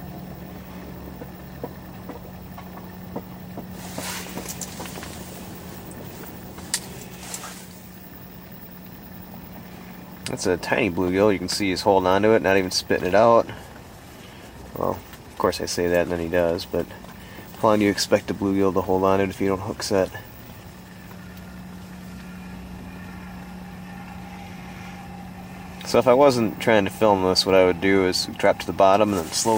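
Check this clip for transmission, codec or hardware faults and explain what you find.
No transmission, codec or hardware fault can be heard in this clip. Nothing in the audio points to a problem along the path that carried it.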